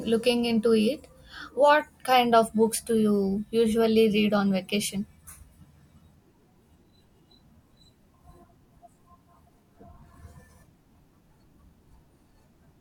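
Nothing stood out as a technical fault on listening to this recording of speech.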